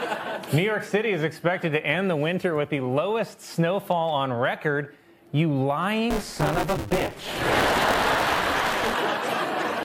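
From 6.10 s to 8.94 s the writer filling the playback ring buffer and the hardware reading it drift out of step and cross inside each period, causing buffer tearing. Under half of every period replays audio from roughly 20 ms earlier, with hard joins either side, producing a robotic 200 Hz buzz that points to a 5 ms buffer period.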